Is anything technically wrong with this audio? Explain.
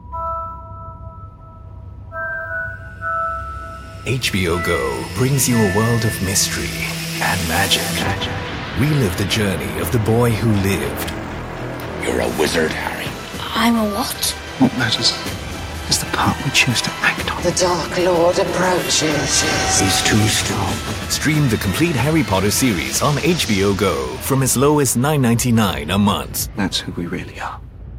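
No, nothing technically wrong can be heard in this audio. There is no moment in the recording where a fault stands out.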